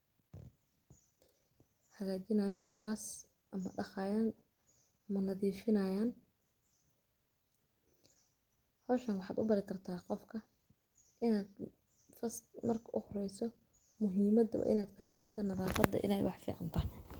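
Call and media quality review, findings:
Long network dropout at 2.47–2.89 s and 14.99–15.39 s: sound stretches into a fading buzz for about 0.4 s, then resumes further on with that span gone. The second gap ends in a brief silence of roughly 10 ms. Likely a jitter buffer underrun with loss concealment.

Short concealed packet loss at 14.75, 14.81 and 14.85 s, just before the second dropout: brief smears or wobbles, each about 20 ms of missing audio. The decoder's concealment extends the preceding sound, then crossfades back into the received stream.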